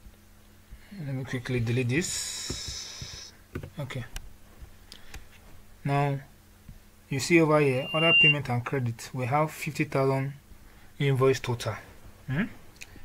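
From 7.73 to 8.36 s there is loudspeaker feedback squeal. A microphone is picking up its own loudspeaker, and the loop gain passes one at 2.8 kHz. That tone swells in under half a second. It peaks about 10 dB above the surrounding sound.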